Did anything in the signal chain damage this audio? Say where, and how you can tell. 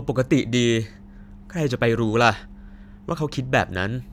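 No, nothing in the signal chain damaged this audio.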